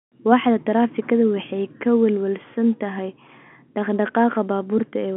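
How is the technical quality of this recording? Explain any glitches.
No glitches can be heard anywhere in the recording, and its narrow telephone band of roughly 200 Hz to 3.4 kHz is simply the normal sound of G.711 telephone coding at work rather than a defect.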